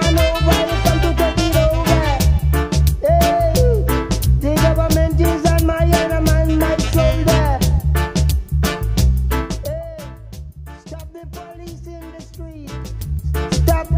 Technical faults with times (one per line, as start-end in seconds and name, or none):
9.32-9.96 zipper noise
12.51-13.55 zipper noise